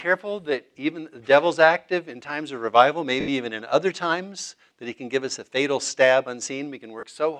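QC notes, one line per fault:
3.20–3.28 s and 7.00–7.03 s, lost LE Audio frames: the sound breaks into a brief noisy smear, about 80 ms and then 30 ms, which fits eight and three 10 ms frames. The LC3 decoder filled each gap by repeating the last spectrum with random signs, fading it as the longer loss went on.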